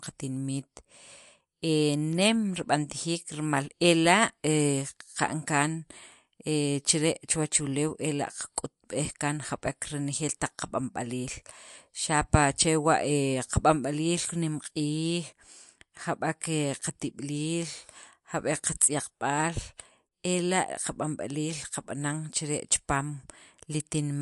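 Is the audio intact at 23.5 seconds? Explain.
No, at 23.5 seconds the speech carries the same MP3 compression damage heard through the whole clip. Nothing is left above about 11.3 kHz, so the top end sounds dull, and the quieter detail has a watery, swirly shimmer with a metallic edge on the s sounds. That's the likely result of an encoder starved of bits, which fits a low rate around 56 kbps, chopping the treble and switching weak frequency lines on and off between frames.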